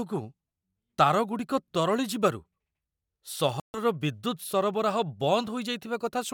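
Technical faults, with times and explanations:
3.60–3.79 s, Bluetooth stall: the speech cuts to total silence for 141 ms and then carries on, most likely because radio interference delayed packets long enough for the headphones' buffer to run empty, so playback paused until the resent data arrived. On the waveform this is a flat, near-silent stretch with abrupt edges. The spectrogram shows a clean vertical blank band across all frequencies, with no fade on either side.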